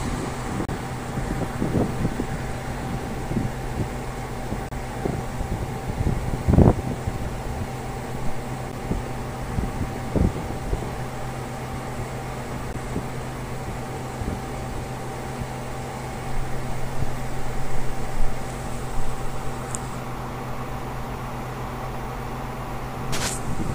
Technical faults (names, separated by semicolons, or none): gap between stream segments